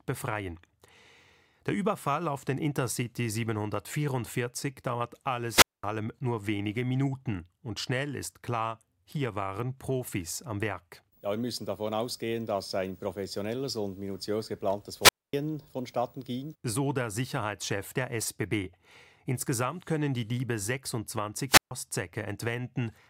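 At 5.46 s the speech breaks in a wireless microphone squelch dropout lasting until 5.87 s, with the output muted for about 217 ms. Two more follow, from 15.01 to 15.33 s (a 247 ms mute) and from 21.48 to 21.71 s (a 138 ms mute). Each time the FM radio link fades, hiss rises briefly, and the receiver's squelch cuts the output to near silence before the signal recovers and the speech returns.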